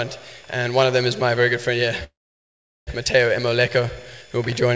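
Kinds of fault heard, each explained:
Call audio freeze: from 2.04 to 2.89 s the last sound trails briefly into about 0.76 s of silence, likely a starved jitter buffer. The audio then resumes where it stopped, with nothing lost, but everything after now runs 0.83 s later.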